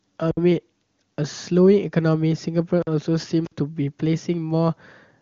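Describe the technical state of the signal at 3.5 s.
At 3.5 s an intermittent contact fault runs from 3.45 to 3.53 s: a loose connection opens for about 49 ms, cutting the speech with crackle at both edges and faint hiss during the gap, unlike a codec dropout, which would be a clean, crackle-free silence.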